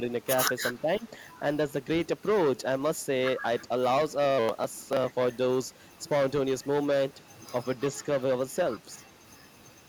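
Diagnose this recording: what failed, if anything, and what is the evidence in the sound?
The speech suppressed in double talk sits in the call-processing stage. Between 0.81 and 1.12 s the speech level dips by around 10 dB, with roughly 150 ms of that span pulled down in pieces. On a waveform the envelope shows sudden notches; on a spectrogram the energy thins. The echo canceller's suppressor likely mistook simultaneous far-end and near-end talk for echo and attenuated both.

Echo leak, also from call processing, appears as faint delayed copies at 1.06 to 1.10 s and 7.76 to 7.81 s, each trailing its source by 359 ms, around 40 dB and around 35 dB below the speech respectively. A spectrogram shows short, weak repeats of earlier harmonic patterns offset by that fixed delay. The far-end canceller likely left loudspeaker pickup uncancelled, returning it down the line.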